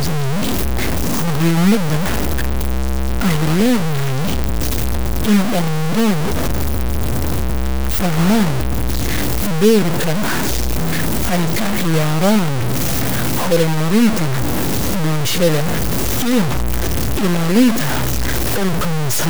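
Throughout the speech, the likely cause is low bit depth without dither: the samples were cut down to very few levels and truncated rather than rounded, which fits a 3-bit signal. Because no dither breaks up the rounding, the error tracks the waveform. The result is a harsh, grainy distortion nearly as loud as the speech itself, shifting with every syllable, while the softest passages collapse into silence or a choppy sputter between two steps.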